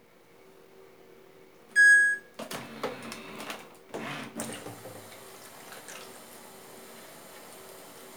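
Nothing stood out on listening to this recording of sounds.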